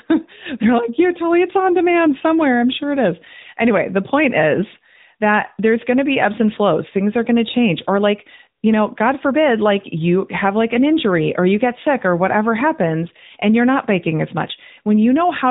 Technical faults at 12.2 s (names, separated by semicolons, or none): AMR narrowband mobile codec